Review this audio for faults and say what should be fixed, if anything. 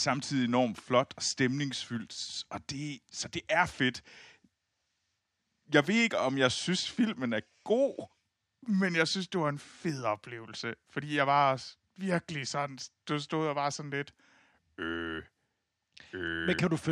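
Nothing in the audio needs to be fixed, as no faults were found.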